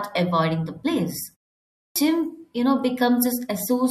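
At 1.81 s, after a pause of about 0.53 s, the speech resumes with a clipped start after a pause. The output path appears to have dropped into a low-power idle state during the gap and needed time to wake and resynchronise, so roughly 147 ms of audio, up to 1.96 s, never reached the output. The returning speech therefore begins abruptly, its onset missing.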